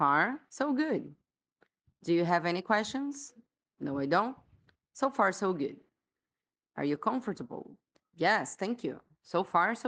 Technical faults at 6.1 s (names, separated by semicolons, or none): none